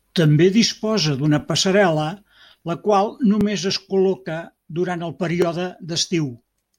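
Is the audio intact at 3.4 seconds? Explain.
No, there's an overlapping-chunks glitch at 3.41 s. The audio was handled in 2.0-second chunks, and this one starts before the previous one finished, so about 12 ms gets played twice at the join. You hear it as a brief click or stutter.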